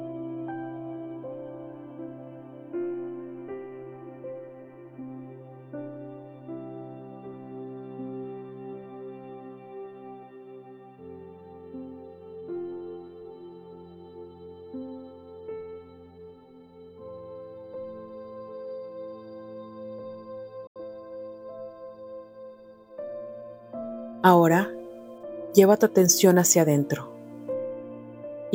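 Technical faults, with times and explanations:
20.67–20.80 s, digital broadcast dropout: the audio snaps to silence through a fade of about 3 ms, leaving a hole of roughly 85 ms, which fits two lost frames. The receiver muted when frames failed, and the programme resumes later with the missing material gone.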